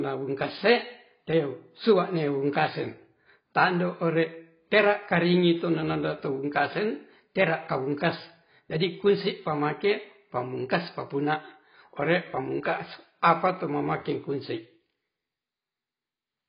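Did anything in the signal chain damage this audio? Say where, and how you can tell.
Yes. The damage sits at the codec stage and runs through the whole speech clip. Nothing comes through above 5 kHz, so the sound is dull and muffled from start to finish. Sibilants turn fizzy and smeared, and sustained sounds warble. This is likely heavy AAC compression, AAC-LC at a very low bitrate. The damage points to something around 16 kbps. At that rate the encoder lowers its cut-off and starves the upper bands, leaving gaps and substitute noise.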